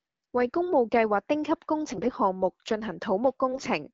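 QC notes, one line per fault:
1.88–2.16 s, AMR bit errors: the voice goes hoarse and gargly for about 0.3 s while pitch and level hold. Around a few percent of the less protected bits got flipped but the checksum still passed, so the decoder used garbage pulse positions and slightly wrong gain and spectrum values.
3.52–3.68 s, AMR bit errors: same scratchy gargle, shorter and a touch heavier. Around the HD Voice band sounds clean, which points to AMR-WB at about 12.65 kbit/s.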